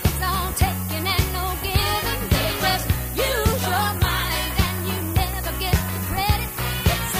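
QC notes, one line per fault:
Throughout, low bit depth with noise shaping: a steady, thin hiss climbing sharply toward the top of the band, nearly as loud as the sound itself. The signal is held to 6 bits, and the rounding error is fed back and pushed upward in frequency.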